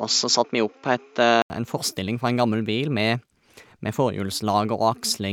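From the start to 1.5 s the speech sounds dull and boxy, with nothing above 7.4 kHz, a faint added noise floor, and a level a few decibels different. At 1.5 s an 80 ms gap precedes clearer sound, likely an input switched to a poorer device.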